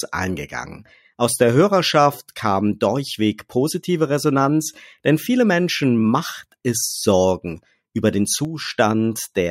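Speech, with a sudden gain jump from 8.45 to 8.70 s, right after "über den". Voice and background noise drop together by about 6 dB, likely from an unramped gain change.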